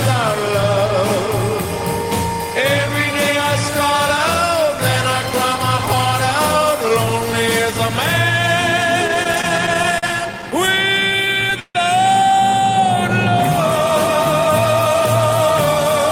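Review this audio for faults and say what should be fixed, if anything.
Repeated stalls (stutter) run from 9.07 to 11.77 s. The jitter buffer kept running dry, so the receiver held the last sound through many short pauses (up to 153 ms, faded in the longer ones), which stretched about 17% of that span without losing anything. A spectrogram shows repeated frozen, smeared bands, and the waveform shows stretched segments with fading dips. A larger, adaptive jitter buffer and steadier packet delivery would prevent this.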